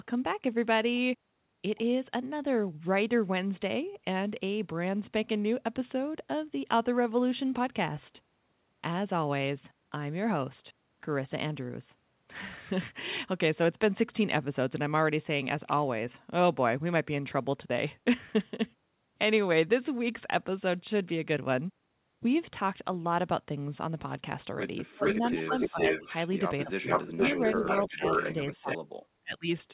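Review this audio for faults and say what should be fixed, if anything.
Speech suppressed in double talk, at 24.94–26.08 s, 26.65–28.03 s and 28.34–29.47 s, is likely caused by the echo canceller failing to tell the local talker from loudspeaker echo while both sides spoke, and turning everything down. The speech dips in pieces, by about 30, 25 and 40 dB at worst, for around half a second in each stretch. A canceller with better double-talk detection, or a headset, would keep the local voice open during overlap.

An echo leak, at 25.05–26.29 s and 26.86–28.78 s, likely comes from a far end playing through a loudspeaker, where the echo canceller let part of its microphone pickup pass back. A copy of the speech returns 454 ms late at about the same level as the original. Tuning that end's echo canceller properly, or using a headset, would stop the return.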